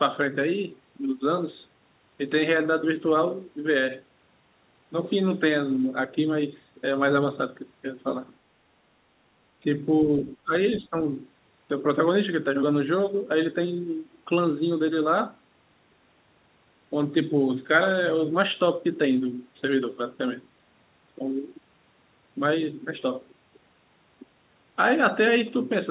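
An echo canceller that likely could not tell this talker from loudspeaker echo while both sides spoke at once turned the speech down, causing speech suppressed in double talk. From 10.25 to 10.53 s the speech dips by as much as about 20 dB, fading in patches totalling around 150 ms. A second, shallower dip of about 10 dB follows from 10.77 to 10.96 s, again chopping the speech over roughly 150 ms, all within a band that stops at 4 kHz.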